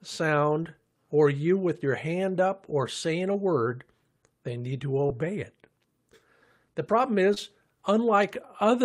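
A speech clip with two spots of short concealed packet loss, from 0.63 to 0.81 s just before "or you with your" and again around 7.34 to 7.38 s. Each time about 20 ms of audio arrived too late, and the decoder patched the gap by extending the last sound before blending back, leaving a brief smear.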